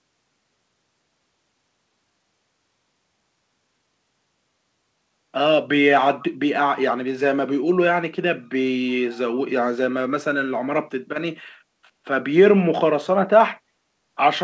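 From 6.19 to 6.25 s a brief echo leak surfaces: a faint copy of the speech, 324 ms late and roughly 25 dB down, likely loudspeaker pickup the echo canceller missed. A spectrogram shows a weak repeat of earlier harmonic patterns, capped at 8 kHz.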